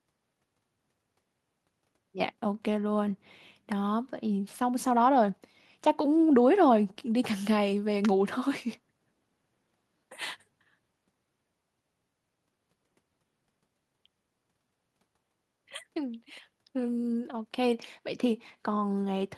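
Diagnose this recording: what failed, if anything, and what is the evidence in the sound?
Nothing failed: no stage of the chain, from capture through storage to playback, leaves any audible evidence of a fault in this speech recording.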